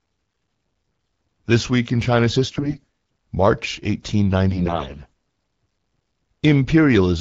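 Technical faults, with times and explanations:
2.45–2.84 s and 4.50–5.11 s, AMR bit errors: a weak link flipped the less protected bits of the AMR-WB frames, around 15 percent of them, while the core checksum still passed. Misplaced excitation pulses and skewed gain and spectral values make the speech turn hoarse, scratchy and gargly, though pitch and loudness roughly hold against the clear 12.65 kbit/s coding around them.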